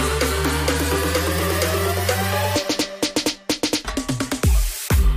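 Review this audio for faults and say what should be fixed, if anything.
Nothing stood out on listening, so there is nothing here that needs fixing.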